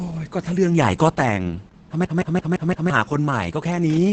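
The whole clip carries Opus voice compression at a low rate, about 10 kbps in SILK mode: nothing above roughly 8.6 kHz, and the speech sounds muffled, hoarse and a bit robotic. From 2.05 to 2.90 s there's a system hang loop: the machine stalled while the hardware kept replaying one 171 ms chunk (fitting an 8192-sample buffer) five times, a machine-gun stutter at about 5.9 Hz, with around a second of speech lost.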